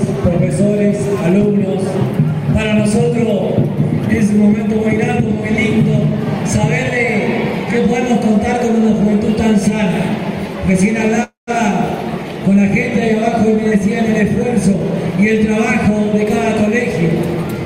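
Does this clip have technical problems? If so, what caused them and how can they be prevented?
Yes. From 11.23 to 11.50 s there is a call audio freeze. The sound stops moving forward and the last moment is carried on as a fading buzz that drops to silence for about 140 ms. The likely cause is packets held up in transit, leaving the jitter buffer empty, so the receiver filled roughly 240 ms with synthetic continuation. When the packets arrived, playback picked up where it had stopped, so nothing appears to be lost, but the timeline is pushed about 240 ms later. Prevention: give the jitter buffer more headroom on congested paths and prioritise real-time traffic with QoS so packet delays stay short.

From 14.75 to 16.67 s there is a jitter buffer speed-up. After the freeze, the buffer was holding more delay than its target. The receiver trimmed tiny pitch-period-length slices over and over, taking out around 150 ms in total. 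This makes the sound play about 8% fast at unchanged pitch, so it comes across as hurried. Prevention: cut the delay bursts that fill the buffer, and set the adaptive buffer to drain its excess more gradually over a longer window.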